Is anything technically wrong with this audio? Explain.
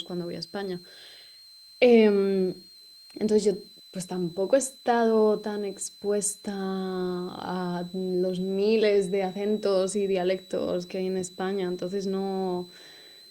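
Yes. A switching supply whistle runs through the whole speech clip: a thin, high tone around 4 kHz, wandering between about 3.9 and 4.2 kHz, sitting roughly 25 dB below the speech. It comes from a switching power supply cycling at an audible rate, either in burst mode or beating against another supply. As its load shifts, the switching rate moves, which is why the pitch drifts instead of holding steady.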